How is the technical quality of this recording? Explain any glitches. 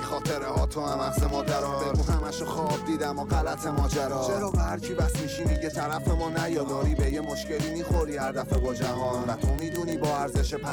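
The recording is marred by a continuous clicking fault. From 0.12 s to 10.70 s there are word clock ticks: a sharp tick roughly every 30 ms, around three hundred in all, uneven in strength. The receiving device ran on its own clock, unlocked to the sender's, drifting by something like 700 ppm. Each slip misreads a few samples and drops or repeats one. On a spectrogram this appears as evenly spaced thin vertical lines across the band, and in the waveform as tiny regularly spaced discontinuities.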